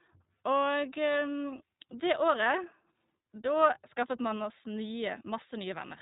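Speech runs the whole way through with a narrow, boxed-in tone and a plainly audible rough, slightly synthetic edge, with nothing above about 3.8 kHz. That points to the iLBC codec, coding each short frame independently, consistent with 20 ms frames at around 15.2 kbps.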